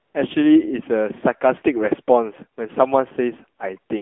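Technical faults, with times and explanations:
Throughout: AMR narrowband mobile codec. Speech is squeezed into about 250 Hz to 3.5 kHz. The model-based coding leaves a plainly buzzy, synthetic voice, which fits a 7.4 kbps mode.
0.00 to 0.14 s: AMR comfort noise. No speech frames arrive for 135 ms. The receiver fills this gap with smooth synthetic noise in place of the real background.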